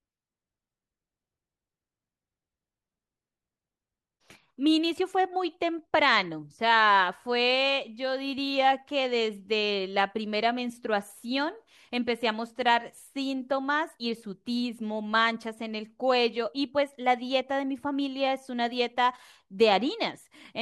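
Speech recording with no technical faults found anywhere in the clip.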